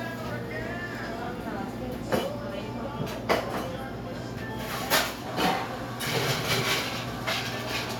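No audible technical faults.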